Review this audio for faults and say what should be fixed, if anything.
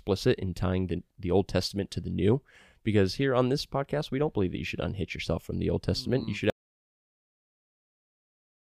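At 6.5 s the speech cuts out into an audio dropout to silence that runs to the end of the clip. It is silent, with no room tone, so the waveform flatlines and the spectrogram goes blank. The likely cause is a lost input or mute while recording continued. Monitor input levels live and secure cables or links so a lost signal is caught and re-recorded.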